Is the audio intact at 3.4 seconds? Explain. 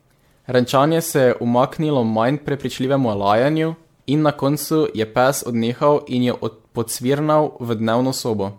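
No. At 3.4 seconds the speech carries generation loss, as it does across the whole clip. The sound has a swirly, smeared, hollow quality beyond what a single 96 kbit/s MP3 pass would give, with blurred attacks and nothing above 19.8 kHz. The likely cause is repeated MP3 decoding and re-encoding, around seven passes, each quantising on a shifted frame grid so that noise and spectral holes accumulate.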